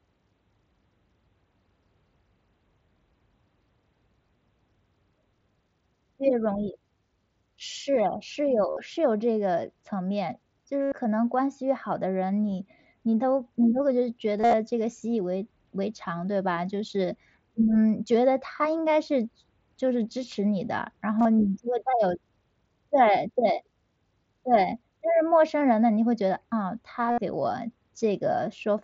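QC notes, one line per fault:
8.70 to 27.18 s, concealed Bluetooth headset packet loss: lost packets at 8.70, 10.82, 14.38, 21.19 and 27.11 s, 45 to 113 ms each, get filled by looping the last bit of waveform. You hear a short buzzy held tone, then a slight warble as real audio resumes.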